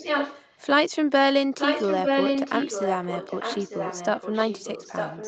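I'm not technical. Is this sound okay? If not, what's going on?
No. There is echo leak: a copy of the speech repeats about 0.9 s late, from 0 to 0.6 s at nearly full loudness, then from 1.58 s to the end somewhat quieter. Someone was likely on a speakerphone whose echo canceller missed it.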